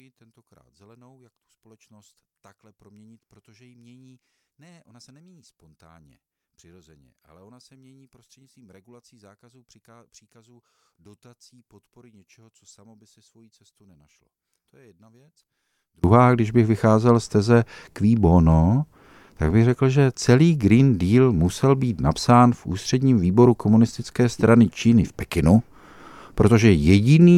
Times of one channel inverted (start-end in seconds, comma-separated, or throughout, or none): 0.00-16.04